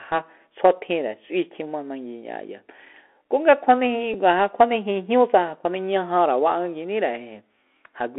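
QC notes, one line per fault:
throughout: Bluetooth CVSD headset codec. Speech is confined to roughly 250 Hz to 3.4 kHz, with a granular hiss, scratchy s sounds and slope-overload distortion on loud bright sounds, unlike plain band-limiting.
4.14 s: Bluetooth headset packet repeated. A brief tick where about 7.5 ms of audio was replaced by repeated data, which fits two lost packets, too short for a buzz.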